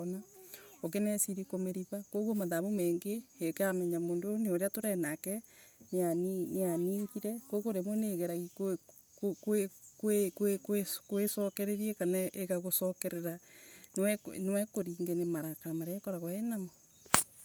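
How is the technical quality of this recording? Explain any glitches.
The recording has plainly audible codec damage throughout the speech. Its upper band sounds breathy and grainy rather than cut off, which sets it apart from a simple low-pass bandwidth limit. Content still reaches about 20.1 kHz. This is likely Bluetooth LC3 compression: at a rate that fits roughly 48 kbps with 10 ms frames, the codec zeroes upper spectral bands and refills them with noise.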